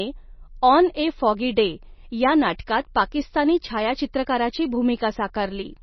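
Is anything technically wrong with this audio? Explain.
Yes, there's one problem, and it runs the whole way through. Nothing comes through above about 5.9 kHz, and the speech has a watery, swirly texture with chirpy s sounds and smeared consonants. That's likely heavy MP3 compression at something like 24 kbps: short of bits, the encoder chops the treble and weak frequency lines blink on and off between frames.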